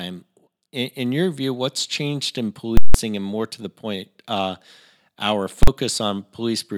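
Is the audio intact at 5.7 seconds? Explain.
No. Invalid numbers at full scale hit from 5.63 to 5.68 s, about 43 ms, which fits a 2048-sample block. A calculation produced infinite or invalid values that were forced to the largest positive or negative level, so the speech is replaced by one loud bang.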